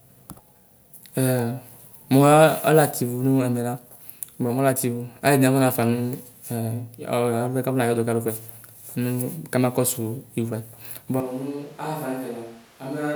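From 11.20 s to the end, the speech turns suddenly hollow and roomy, thinner, about 10 dB quieter and noisier: likely a switch to a distant microphone.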